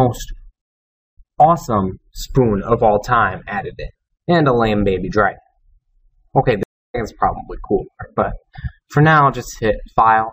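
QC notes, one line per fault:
0.62–1.34 s: stream reconnect. The sound drops out for 0.56 s. The connection broke and the player restarted decoding. It resumes 0.16 s earlier than where it stopped, so a short stretch repeats. The fresh decoder starts muted or fading in.
6.63–6.96 s: stream reconnect. Silence lasts 0.31 s while the player reconnects. Playback picks up roughly 0.2 s later, so a small piece of sound is skipped. The restarted decoder again brings the audio back with a muted or faded start.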